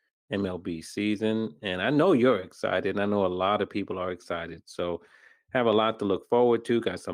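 No technical faults are audible anywhere in this speech recording.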